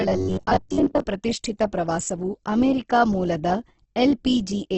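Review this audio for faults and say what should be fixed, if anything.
From 0.01 to 1.0 s the speech turns into a rigid, metallic buzz pitched at 93.8 Hz, ending just before "ಪ್ರತಿಷ್ಠಿತ ಪ್ರವಾಸವು ಅಮೆರಿಕ ಮೂಲದ". This is robotic sound from repeated short buffers, likely from audio arriving too seldom so that playback loops the last block instead of advancing. A 93.8 Hz buzz implies a repeat every 10.7 ms, and most of the section is made of these repeats. Prevent it by enlarging the jitter buffer or fixing the delivery stall so real audio is always available.

Across the whole clip the sound is rough and grainy, with heavy coding damage and nothing above 8.4 kHz. This points to Opus compression, likely in its CELT music mode at a low rate that fits around 12 kbps. Starved of bits, the encoder fills bands with folded or noise-like content, which turns tonal parts of the speech noisy, and it narrows the bandwidth to wideband. 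Prevent it by raising the bitrate or letting the encoder use its speech mode.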